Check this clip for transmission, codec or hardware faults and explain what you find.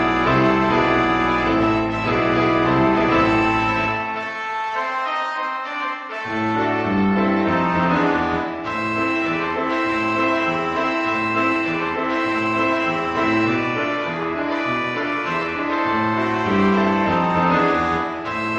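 Nothing wrong can be heard anywhere in this clip.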